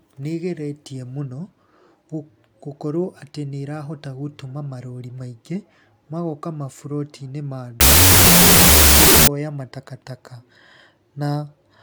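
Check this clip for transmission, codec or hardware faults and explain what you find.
One fault turns up in this speech clip.

Wrong sample width, 7.81 to 9.27 s: each original sample is being read as two shorter ones, which fits 32-bit float data read as 16-bit integers. The audio plays at half speed, an octave low, buried under loud, harsh noise from bytes split mid-sample.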